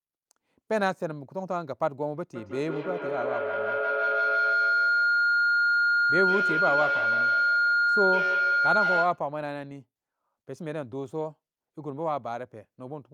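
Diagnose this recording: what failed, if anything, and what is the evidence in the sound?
Two devices on the same call formed an acoustic loop with gain above unity, a call-processing failure. From 2.35 to 9.25 s a feedback howl builds near 1.5 kHz, pulsing roughly every 150 ms at the loop delay, and peaks about 2 dB above the speech.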